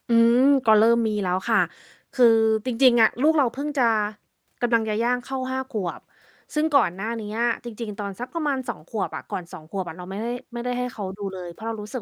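Listening to this speech recording, nothing stood out as a technical problem.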